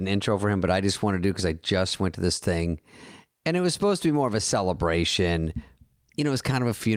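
No technical faults are audible.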